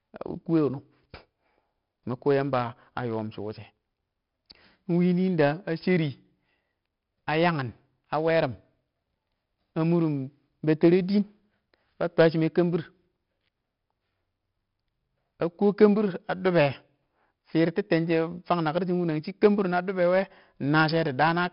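Throughout, 4-bit ADPCM compression coarsely quantises each prediction step, leaving heavy level-tracking hiss, smeared speech attacks and nothing above 5.3 kHz, which suggests roughly 44 kbps.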